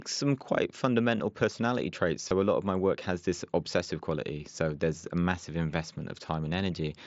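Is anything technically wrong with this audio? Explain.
Yes. Concealed Bluetooth headset packet loss occurs twice: a brief gap at 1.18 s, between "some quite" and "personality traits", and another from 2.28 to 2.31 s, after "personality traits" and before "a lot of my". Packets from the headset were dropped, roughly 15 ms and 22.5 ms of audio, which fits two and three lost packets. The receiver filled each hole by repeating the best-matching recent waveform stretch. The sound is a buzzy smear held at full level with a slight warble on recovery. On a waveform, this appears as a short periodic repetition at steady level. On a spectrogram, it shows as narrow, evenly spaced harmonic lines within the mSBC wideband limit of about 8 kHz.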